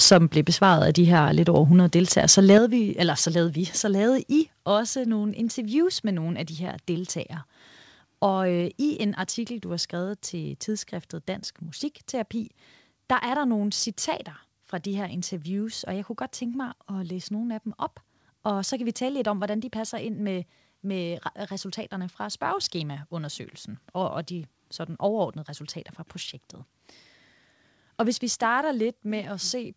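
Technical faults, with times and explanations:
0.00–0.17 s and 2.29–2.58 s, microphone overload: the loudest peaks, just before "blev besvaret af de" and again before "vi eller så lavede", hit a hard ceiling and have their tops flattened, giving a harsh, crackly edge. The signal likely ran about 6 dB and then about 5 dB past the converter's limit. Only a small share of samples were squared off, so the damage is brief bursts of grit rather than steady distortion.
0.13 s and 2.58 s, microphone volume stepped down: right at or just after each overloaded stretch, the voice and the room behind it drop in level abruptly, by about 4 dB at the start before "blev besvaret af de" and by about 7 dB after the second burst. This is likely automatic gain control in the call software reacting to the clipping by pulling the input volume down in a single step. The call audio is band-limited, with nothing above 8 kHz.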